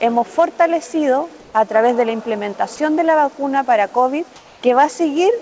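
From 1.40 to 1.54 s, and again from 4.36 to 4.62 s, the quiet background turns into flat, featureless hiss, about 1 dB and then about 2 dB lower. This is comfort noise in place of the background, likely from discontinuous transmission filling pauses with synthetic noise.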